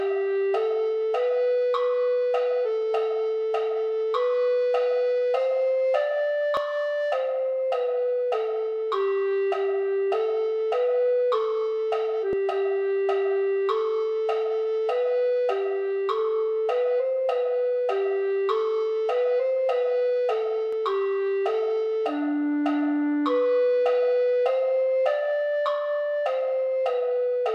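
At 6.57 s, 12.33 s and 20.73 s the sound jumps abruptly forward, pointing to a dropped buffer (overrun), likely because the capture program fell behind and the hardware overwrote samples it hadn't yet collected. Roughly 20 ms is lost at the first point and around 30 ms at each of the others. Unlike an underrun, no silent gap appears: the audio on either side is spliced directly, so the skip itself gives it away.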